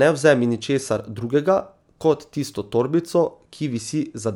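From 1.01 to 3.21 s, after "vzemi ničesar", there is imaging from linear upsampling. Crude interpolation, consistent with a 24 kHz source, dulls the top band and leaves faint 12–24 kHz images that put a metallic shimmer on sibilants.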